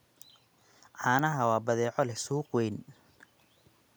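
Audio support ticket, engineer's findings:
No fault found in this speech clip; nothing to report for the ticket.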